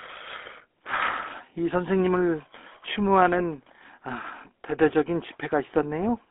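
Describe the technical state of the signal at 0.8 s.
GSM full-rate codec damage is present at 0.8 s, as it is across the whole clip. The codec rebuilds speech from a vocal-tract filter excited by evenly spaced pulses, discarding two of every three excitation samples, at a rate that fits 13 kbps. The band is confined to roughly 250 Hz to 3.5 kHz, so the sound is thin and muffled, and the damage is plainly audible as a buzzy, gravelly roughness on the speech.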